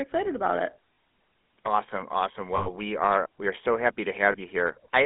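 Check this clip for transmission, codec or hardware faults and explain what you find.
Two faults are present: the whole clip carries GSM full-rate codec damage, and three short bursts of lost GSM frames interrupt it.

GSM full-rate codec, throughout. The speech has a plainly audible buzzy, gravelly roughness. The codec rebuilds each stretch of sound from a vocal-tract model excited by a sparse, regular pulse train, so fine detail in the excitation is thrown away and the voice takes on that grainy edge. The band runs only from 200 Hz to 3.6 kHz, consistent with a 13 kbps full-rate link. A plain telephone band-limit would be dull but clean. The rasp is what marks this as the codec itself.

Lost GSM frames, at 0.94 to 0.98 s just after "excited about it", at 2.56 to 2.68 s just before "we are we are", and at 4.32 to 4.36 s just after "we are so happy". At each point the decoder had no valid data, so it kept repeating the last good frame's settings. 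The result is a brief metallic, ringing hold on the sound rather than silence. The middle event is the longest, pointing to about 100 ms or five frames. The other two are about 40 ms and 20 ms. A network dropout would leave a dead gap and a clock slip would click, but these sustain a tinny echo of the preceding sound.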